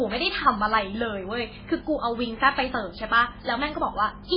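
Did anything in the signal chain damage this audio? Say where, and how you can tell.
Yes, at the codec stage. Throughout, the speech stops above 5.2 kHz and sounds heavily watery, which points to MP3 compression at a bitrate fitting 16 kbps as the likely cause. The encoder zeroes weak frequency lines to save bits.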